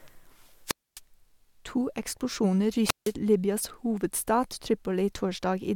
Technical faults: wireless microphone squelch dropout

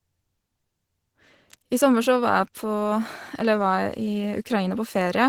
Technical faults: Opus compression

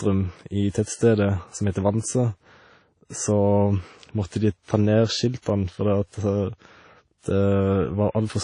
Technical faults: WMA compression; pre-echo

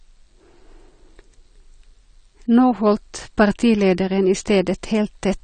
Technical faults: AAC compression

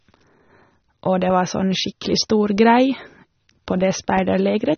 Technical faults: AAC compression

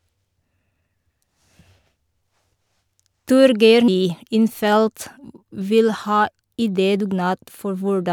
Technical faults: damaged data in a compressed stream

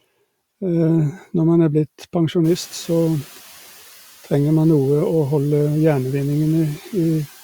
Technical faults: noise suppressor catching up

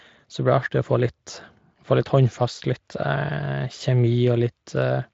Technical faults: none

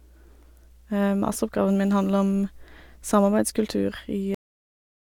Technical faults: mains hum; cut-off end

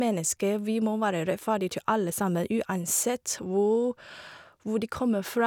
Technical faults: none

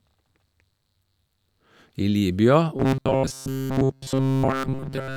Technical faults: robotic sound from repeated short buffers

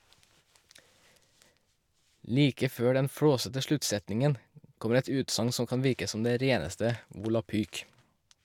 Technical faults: none

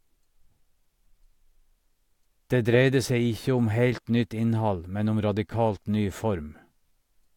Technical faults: none

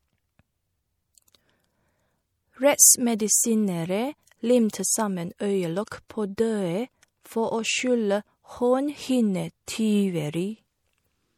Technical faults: MP3 compression; pre-echo

